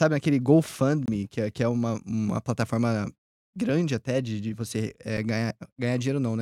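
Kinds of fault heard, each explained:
Block of digital silence: The speech cuts abruptly to silence and back with no fade. From 1.06 to 1.08 s, a 23 ms hole fits a 1024-sample buffer. At 5.17 s, a 5.8 ms block sounds like a tick.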